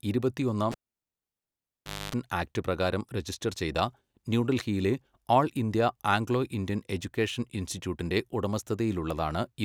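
At 0.72 s a cable is pulled and plugged in. A pop gives way to about 1.38 s of near silence, including 0.27 s of 50 Hz mains buzz as only the tip touches, and a second pop at 2.15 s before "ആക്ട് പ്രകാരം രജിസ്റ്റർ". The waveform shows spikes around a flat gap, and the spectrogram shows stacked horizontal hum lines during the buzz.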